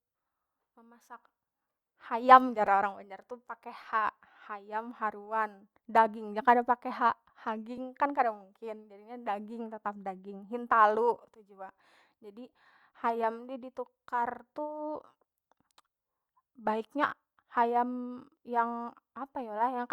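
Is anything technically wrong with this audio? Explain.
Yes. A repeated buffer occurs at 2.67 s, between "hayam jar" and "orang banjar tu pake". New audio did not reach the output in time, so the device replayed its last block of about 5.3 ms twice more, which fits a 256-sample buffer. Because the piece is so small, the three identical copies with hard joins are heard as a brief click or buzz rather than a stutter, and essentially no audio is lost.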